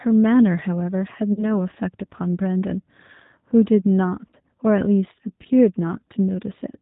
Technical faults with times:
0.00-6.82 G.729 codec
1.33-1.50 VoIP packet loss concealed by the speech codec
4.31-4.36 VoIP packet loss concealed by the speech codec

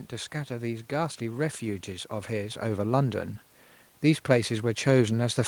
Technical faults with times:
0.31-3.29 automatic gain rising
4.02-5.47 automatic gain rising

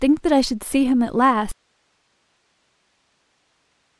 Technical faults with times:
1.51-3.99 audio dropout to a faint residue

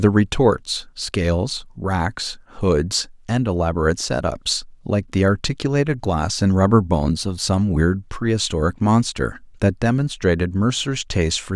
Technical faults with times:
none

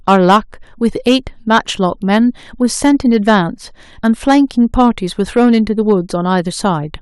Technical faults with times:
0.08-0.37 hard clipping
0.85-2.18 hard clipping
2.84-3.39 hard clipping
4.05-4.38 hard clipping
4.79-4.89 hard clipping
5.37-5.92 hard clipping

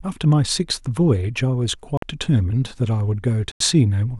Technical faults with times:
1.97-2.03 Bluetooth stall
3.52-3.60 Bluetooth stall

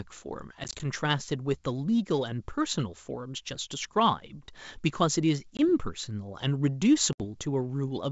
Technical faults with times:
0.64-0.86 packet loss on an ADPCM call
5.57-5.69 packet loss on an ADPCM call
7.13-7.31 packet loss on an ADPCM call

